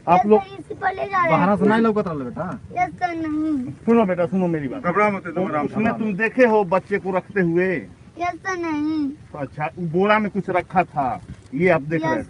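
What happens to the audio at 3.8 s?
Nothing goes wrong at 3.8 s; the audio passes through the call path intact there, with no dropout, glitch or other fault.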